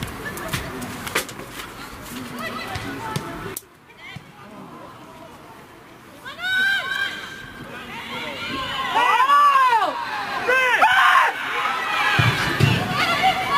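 Crude rate conversion runs throughout: the rate was raised by repeating the nearest sample without filtering, consistent with 44.1 kHz to 48 kHz. The resulting error, roughly 25 dB below the sound, adds a gritty, inharmonic fizz tracking loud and high passages.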